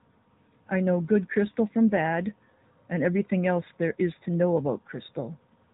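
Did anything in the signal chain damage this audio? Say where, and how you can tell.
Yes, the codec stage did it: this speech has been through an AMR narrowband mobile codec for the whole clip. Everything above 3.8 kHz is gone, and the voice has that plainly buzzy, synthetic edge, which fits a mid-rate AMR-NB mode around 10.2 kbps.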